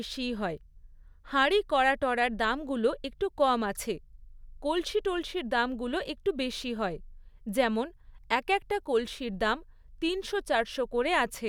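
Nothing in this speech recording stands out as a technical fault at any point, so there's nothing here to flag.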